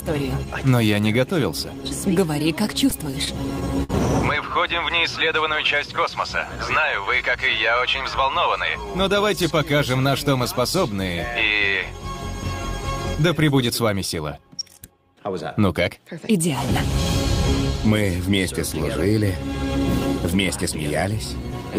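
Between 2.55 and 3.91 s the sound drags and stutters, catching seven times as brief held stretches, the longest about 58 ms. These are repeated stalls (stutter): packets arrived late, the jitter buffer kept running dry, and the receiver extended the last sound, about 124 ms in all, with nothing lost.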